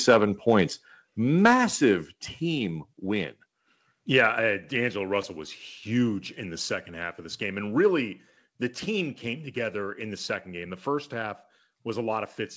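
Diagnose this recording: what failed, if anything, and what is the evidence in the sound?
At 1.02 s and 2.04 s, just before "team win", speech and background both drop about 4 dB in one step and stay down. This is likely call processing stepping the microphone volume down. Unlike a compressor, the level doesn't recover, and unlike packet loss, nothing goes missing.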